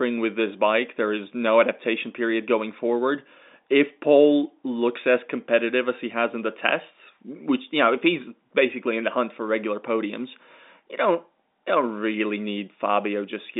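No technical faults are audible.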